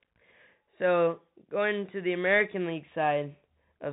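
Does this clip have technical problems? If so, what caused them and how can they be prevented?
Yes. Throughout, the speech carries Bluetooth CVSD headset codec damage: nothing above 3.8 kHz, scratchy sibilants and granular hiss from one-bit delta coding, which fits a 64 kbps link. Prevent it by recording locally or using a wideband headset mode.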